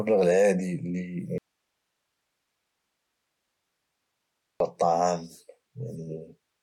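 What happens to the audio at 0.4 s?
Nothing goes wrong at 0.4 s; the speech plays through that moment intact, with no dropout, click or distortion.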